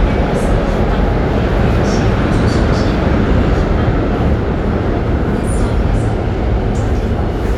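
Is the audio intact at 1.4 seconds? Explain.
Yes, at 1.4 seconds the audio plays through intact, with no dropout, click or other fault at that moment.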